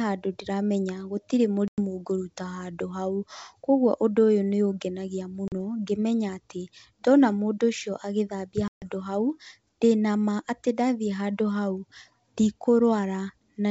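Three hard-edged silent holes from packet loss on an ADPCM call break the speech: 1.68 to 1.78 s after "handũ ndĩramenya gũtirĩ", 5.48 to 5.52 s between "ũndũ ũyũ nĩ ũngenagia" and "ngĩmenya atĩ ndona mũndũ", and 8.68 to 8.82 s after "ndona mũndũ ũcio agĩthambia". Each time, the receiver's adaptive predictor and step size drift off the sender's, so the speech returns with a click, some distortion or a wrong level before settling within some tens of milliseconds. The surrounding G.722 wideband coding sounds clear.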